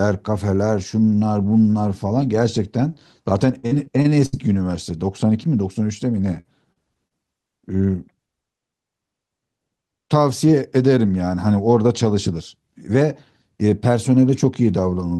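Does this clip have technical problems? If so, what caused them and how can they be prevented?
Yes. Repeated packet loss (robotic sound) occurs at 3.59–4.36 s (six gaps, longest 66 ms) and 6.35–7.14 s (four, longest 47 ms). Each hole is patched by extending the last sound, so rapid repeats sound choppy, unlike a single silent dropout. A steadier network connection or larger jitter buffer prevents it.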